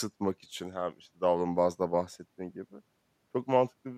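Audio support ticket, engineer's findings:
No audible faults found.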